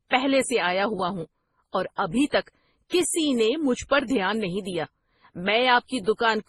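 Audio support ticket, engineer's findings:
Speech, whole clip. Nothing above 12 kHz; two different codec artefact characters layered together. Likely transcoding between lossy codecs, two artefact types heard together, fitting an MP3 at around 24 kbit/s re-encoded to Opus at around 32 kbit/s. Second encoder spends bits on the first one's damage. A single low-bitrate encode gives one consistent artefact character; here two distinct ones coexist, under the lowest cut-off in the chain.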